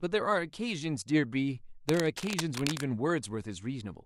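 From 1.87 to 2.84 s, cable scratch noise sits over the speech. Dense, uneven bursts of scratching and rustling run for almost a second, roughly 10 dB below the speech. The likely cause is a worn cable or connector being moved, its contact resistance jumping rapidly.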